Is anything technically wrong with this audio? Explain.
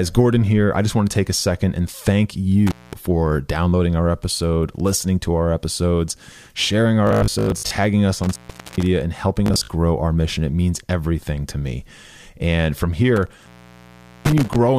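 Yes. The speech has two kinds of fault.

Intermittent contact: a loose cable or plug breaks the connection briefly, so the sound drops out with crackle at each edge and only faint hiss remains. This happens three times. At 2.67–2.93 s there is a 210 ms gap between "second and thank" and "for downloading our episode". At 8.23–8.87 s a 454 ms gap comes just before "and helping". At 13.16–14.56 s there is about 780 ms of dropout.

Bluetooth stutter: audio packets arrived late or not at all, and the receiver replayed its last short buffer to fill each hole, which gives a buzzy, machine-gun repetition. When the sound returns, it has skipped ahead. At 7.07–7.78 s about 448 ms goes missing across 709 ms, with the longest run lasting 93 ms. At 9.46–9.69 s, between "and helping" and "our mission", 149 ms is lost across 224 ms, with runs of up to 56 ms.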